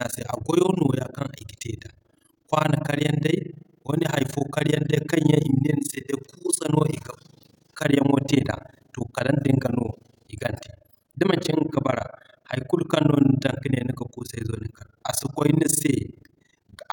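From start to finish the speech carries overlap-add ripple. The signal was split into windowed frames and rebuilt with an overlap whose windows do not sum to a constant gain, so the level swings once per frame, around 30 times a second. The swing is very deep, about 60 dB, so the sound nearly gates off at each trough. The result is a harsh tremolo that gives the speech a rough, robotic flutter throughout.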